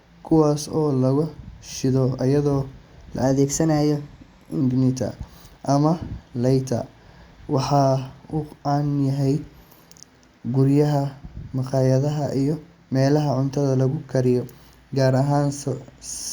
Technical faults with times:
3.23-4.61 wrong sample rate

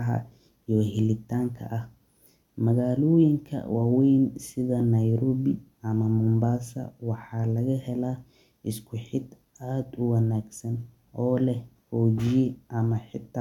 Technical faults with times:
none

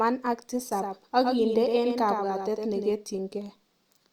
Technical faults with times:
0.72-2.92 doubled audio track

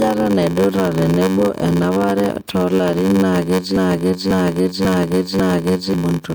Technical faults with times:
0.00-6.35 low-bitrate audio saved at a high bitrate
0.00-6.35 block size mismatch (padded)
3.76-5.94 broken-record loop

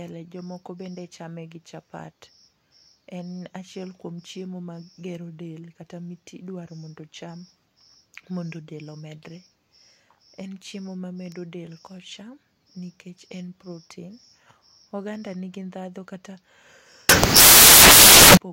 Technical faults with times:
17.09-18.37 samples built from the wrong bytes

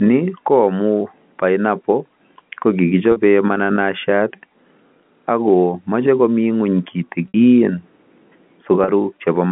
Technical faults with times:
3.12-3.16 packet loss with pitch repetition
7.28-7.34 packet loss with pitch repetition
8.84-8.88 packet loss with pitch repetition

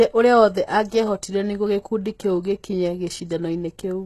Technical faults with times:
0.00-4.05 HE-AAC compression

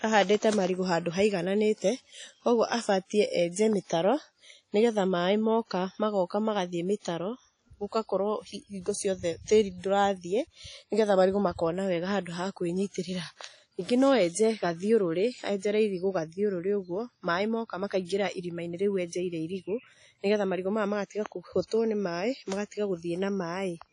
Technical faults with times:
0.00-23.93 WMA compression

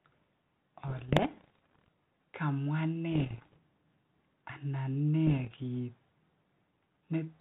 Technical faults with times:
0.88-1.88 bit errors on an ADPCM link
3.12-3.59 bit errors on an ADPCM link
5.27-5.62 bit errors on an ADPCM link

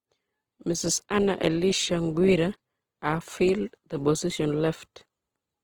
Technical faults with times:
0.00-5.63 Opus compression

